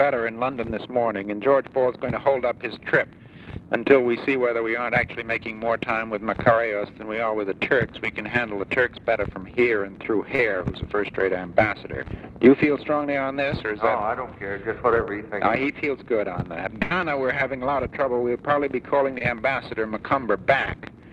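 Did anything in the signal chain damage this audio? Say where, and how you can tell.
Yes. Short concealed packet loss at 10.35 to 10.40 s and 19.18 to 19.22 s, in the network stage: about 40 ms and 20 ms never arrived, and the receiver extended the preceding sound, leaving brief smears.

Burst of packet loss at 16.82 to 16.92 s, also in the network stage: about 80 ms went missing together, heard as a fading continuation before the sound resumes further along.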